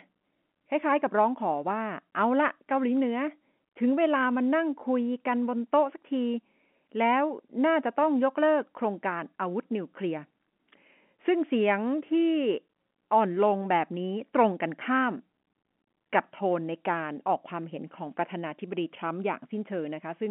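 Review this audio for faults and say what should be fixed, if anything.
Nothing stood out on listening, so there is nothing here that needs fixing.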